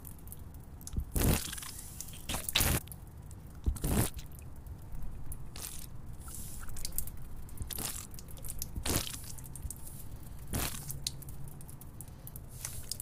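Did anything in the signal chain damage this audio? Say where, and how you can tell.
Yes: damaged data in a compressed stream, codec stage, damage at 2.77–2.79 s and 10.52 s where corrupted frames broke decoder sync until the next header.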